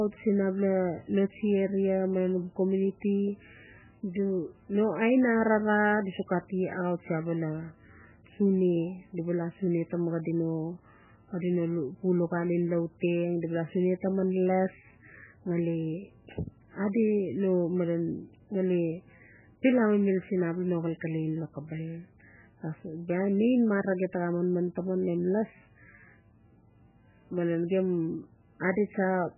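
From start to finish the speech has nothing above 3 kHz, so sibilants lose their hiss and the sound is dull and boxed in. Over that band lies a heavy watery, swirling texture, with consonant onsets smeared. The likely cause is MP3 compression at a very low bitrate, around 8 kbps: starved of bits, the encoder cuts the treble at a fixed point and zeroes weaker frequency lines, which flicker on and off between frames.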